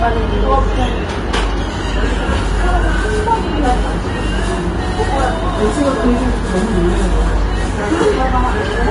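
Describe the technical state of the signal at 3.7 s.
At 3.7 s the sound carries plainly audible Vorbis compression damage, present across the whole clip rather than at this moment alone. The likely cause is a low-quality Vorbis encode, with a density of damage that points to a rate near 31 kbps. The encoder quantised the upper spectrum so coarsely that fine detail turned into grainy, hissy noise and attacks blur. On a spectrogram the energy stops sharply at about 10.6 kHz, with mottled, blocky texture just below that edge.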